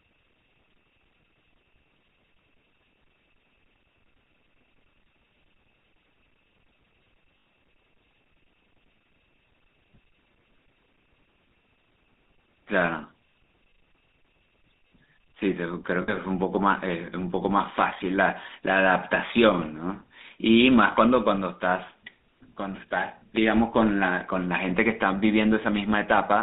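Speech with a buzzy, gravelly roughness throughout, squeezed into a narrow telephone band of roughly 200 Hz to 3.7 kHz with nothing above. This is plainly audible GSM full-rate codec damage, consistent with the 13 kbps GSM full-rate codec. It rebuilds the voice from a vocal-tract model excited by evenly spaced pulses, keeping only every third excitation sample, and that coarse excitation is what gives the voice its grainy buzz. Three times the sound freezes into a short, rough metallic ring: from 7.38 to 7.46 s for about 80 ms, from 16.02 to 16.15 s for about 60 ms, and from 20.92 to 20.95 s for about 20 ms. These are lost GSM frames. The decoder had no valid data for those spans, which fits runs of four, three and one 20 ms frames. It reused the last good frame's settings, so the voice hangs on one sustained, metallic colour instead of dropping out. At 23.36 s there is a single sharp tick, a roughly 7 ms block of digital silence. 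The signal jumps straight to silence and straight back with no fade, and the abrupt edges produce the click. A gap that brief most likely comes from the playback or processing chain failing to fill its output buffer in time.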